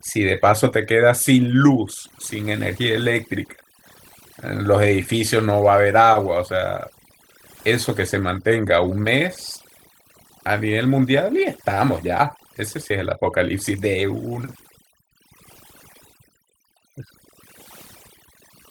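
From start to finish the speech carries overdone noise removal. A noise reduction stage set far too strong pushes any frequency band near its noise estimate deep down or out entirely. Pauses drop to near silence flecked with twinkling specks, and the softer parts of the voice are stripped away with the noise. A starved codec burbles and narrows the band. Here the damage follows the noise floor instead, and the Opus layer stays fullband, reaching about 20.1 kHz with only light coding damage.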